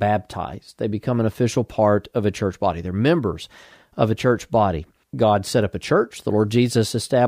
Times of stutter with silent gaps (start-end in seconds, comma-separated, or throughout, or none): none